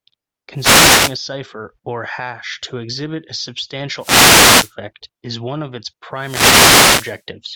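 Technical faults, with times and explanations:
0.54–1.19 s, 3.98–4.74 s and 6.14–7.24 s: wireless microphone noise hits, three bursts of static swishing over the speech, each lasting well under a second to about a second, as the analogue FM radio link faded when reflected paths cancelled and receiver noise rose through.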